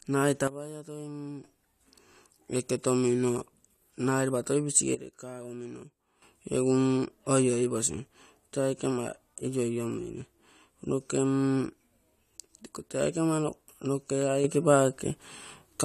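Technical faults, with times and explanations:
0.47–1.44 s, 4.95–6.22 s and 14.44 s to the end, sudden gain jump: the speech and the background noise under it step down together by about 12 dB in the first two spans, returning abruptly afterwards, and in the last span both step up by about 6 dB. Each change lands instantly rather than fading. The likely cause is a digital gain setting or bit shift applied from one sample to the next with no ramp.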